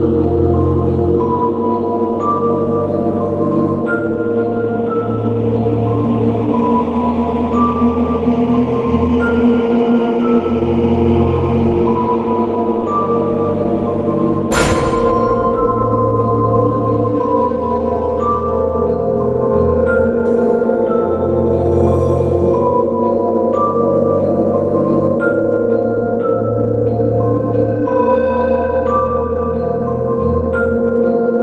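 No technical faults are audible.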